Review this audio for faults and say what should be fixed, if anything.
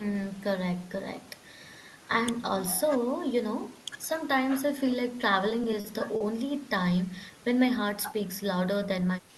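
Between 5.49 and 6.22 s, packets arrived late or slower than playback, so the jitter buffer kept running dry. The result is repeated stalls (stutter): five brief holds, the longest 40 ms, where the receiver stretched the last sound, about 110 ms in all. Nothing is lost, but the speech drags and stutters. To prevent it, let the jitter buffer grow its target delay when arrival timing becomes irregular, and reduce network congestion on the path.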